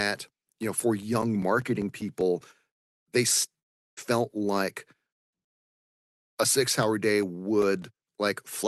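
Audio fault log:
0.63–2.81 s, CD scratch ticks: twelve brief clicks, about five or six a second, each a few milliseconds long, where a scratch left samples the player couldn't rebuild.
3.59–3.99 s, long network dropout: the sound stops for about 0.38 s and resumes further on with that stretch missing, likely from packets that never arrived.
6.83–8.42 s, CD scratch ticks: right after "a six", nine short ticks recur about five or six times a second as the disc blemish passes on each turn.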